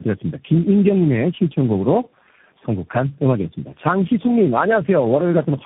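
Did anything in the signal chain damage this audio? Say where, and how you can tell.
Yes: rough, muffled, warbly speech throughout, nothing above 3.8 kHz. Codec stage: tandem speech coding, four codecs re-encoding each other's damage, ending in CVSD.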